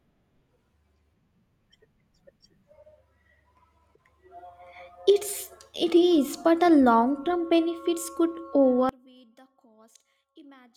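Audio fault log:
8.89–10.76 s, one channel inverted: the speech suddenly drops by about 28 dB to a faint remnant lasting to the end, likely because one stereo channel's polarity is reversed, cancelling the shared centre in mono. The waveform collapses abruptly, and the spectrogram fades to a faint trace.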